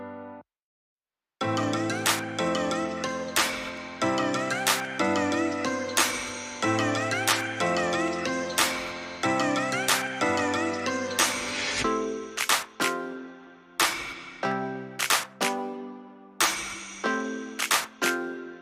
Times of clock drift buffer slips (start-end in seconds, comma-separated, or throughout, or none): 0.56-17.74